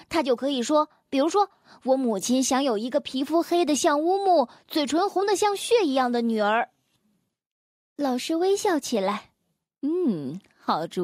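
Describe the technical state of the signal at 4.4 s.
At 4.4 s the speech signal is intact, with no audible technical fault at that moment.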